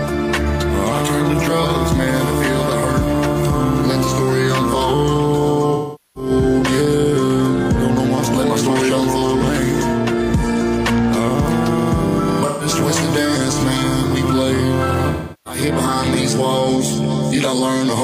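AAC frame loss with concealment strikes at 5.73–6.30 s, 12.47–12.66 s and 15.11–15.61 s: the decoder patches missing frames from the last good spectrum, giving smeared, phasey stretches. Spectrograms show blurred, frozen-looking bands; waveforms show flattened, noise-like envelopes.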